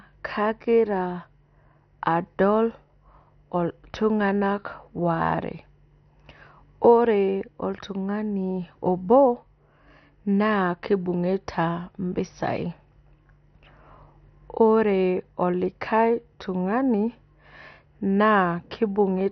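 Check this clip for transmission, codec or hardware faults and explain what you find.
There's one fault, and it runs through the whole speech clip: what sounds like MP2 compression. Nothing comes through above about 6.2 kHz, so everything's dull, with a gurgling, grainy edge. That's likely Layer II running short of bits, which fits a low rate around 48 kbps, so the upper sub-bands get dropped and the rest are coarsely quantised.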